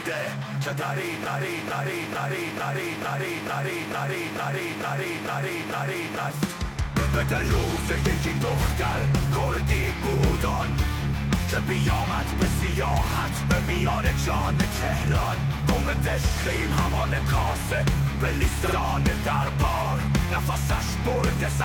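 From 1.26 to 6.30 s, the player or stream likely stalled and kept resending the last fragment it held. The result is a broken-record loop: a 0.45 s piece repeats exactly, back to back, 11 times, and the audio that should have played there is lost.

At 18.63 s, a single compressed block of about 46 ms, which fits one frame, was written out more than once. These repeated frames make the same sliver of sound play twice more in quick succession, a short stutter that lengthens the audio by about 93 ms.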